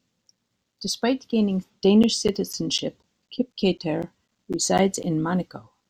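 From 2.03 s to 5.04 s, periodic USB or driver dropouts stall the audio path every 0.25 s, replacing roughly 10 ms with silence each time. This gives around fifteen evenly spaced ticks, and their strict clockwork timing sets them apart from random clicks or irregular buffer underruns.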